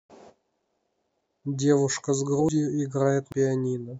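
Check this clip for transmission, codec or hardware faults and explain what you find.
Compressed frames were skipped twice in this speech. Around 2.30 to 2.49 s, roughly a tenth of a second is lost, and around 3.32 to 3.42 s, roughly a fifth. Frames went missing or were rejected as damaged, so playback jumps ahead by the length of the missing frames.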